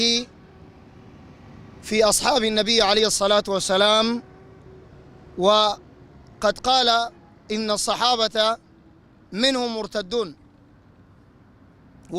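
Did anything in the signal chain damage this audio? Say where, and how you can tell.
No, nothing in the signal chain stood out as damaging this audio on listening.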